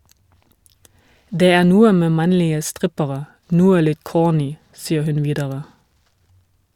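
No technical faults can be heard anywhere in the recording.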